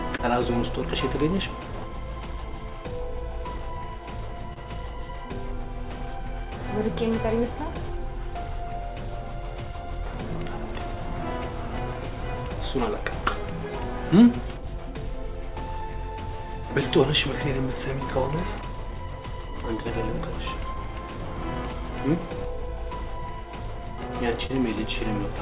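Throughout the clip there is clock drift between sender and receiver: the sender's clock runs roughly 2% slow, so the receiver's jitter buffer keeps draining and has to be topped up. Unlike a single network fault, this never settles. Small timing irregularities recur for the whole duration at uneven spacing, all pulling the same way, and they come from a steady rate mismatch rather than from lost data.

From 0.16 to 6.50 s, scattered short gaps appear, about seven of them. Packets arrived late or not at all, and each hole was patched by extending the preceding sound, adding up to roughly 70 ms, with the longest near 30 ms. They come across as isolated ticks or brief smears. What separates them from the timing edits is that these are one-off repairs with no effect on tempo.

From 1.35 to 24.09 s, repeated timing corrections run alongside. To keep up with the slow sender, the receiver repeatedly stretches short pieces, playing at about 98% speed and inserting roughly 400 ms in total. 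Each edit is tiny and always lengthens, never cuts. The result is a faintly dragging, unsteady pace rather than the distinct clicks of the gap concealment.

Between 17.17 and 18.16 s, a second cluster of scattered short gaps brings three more patches. Together they fill only about 15 ms, none longer than about 7 ms, so they are barely more than faint ticks. From 21.55 to 24.51 s a third cluster adds about four patches totalling around 40 ms, the longest again near 30 ms, heard as brief smears. All of this is carried over a G.711 A-law call path with nothing above 4 kHz.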